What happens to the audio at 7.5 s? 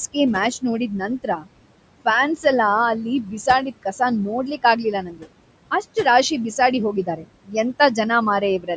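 From 7.44 to 7.55 s there is speech cut by the noise suppressor. The suppressor mistook a faint stretch of speech for noise and pulled it down by up to about 21 dB, so it sounds swallowed rather than abruptly missing. The background sinks with it, and there is no click or hard gap as with a dropout. Around it, noise suppressor artifacts cut the background by about 21 dB, leaving it pumping with the speech.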